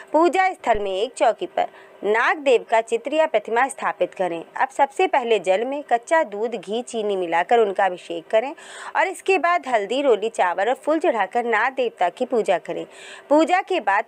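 At 0.75 to 0.99 s a phantom power thump occurs: a supply switching on the live input sends a step through the coupling capacitors, giving a deep thump peaking near -19 dBFS and decaying within 55 ms.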